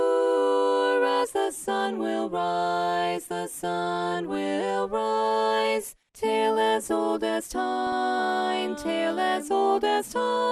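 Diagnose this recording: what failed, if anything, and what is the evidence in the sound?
Throughout, the sound is dull and granular, with a gurgling edge in the upper range. This is most likely MP2 compression at a low rate, around 80 kbps, where starved sub-bands switch off. A spectrogram shows ragged, flickering upper bands and a blocky high-frequency ceiling.

From 7.87 to 7.93 s, a brief burst of burbling sits over the sound: DAB burbling. A small fraction of bit errors reached the decoder, corrupting audio data in what fits a few frames. On a spectrogram, short blips of noise appear in isolated sub-bands. The waveform shows a short, uneven burst.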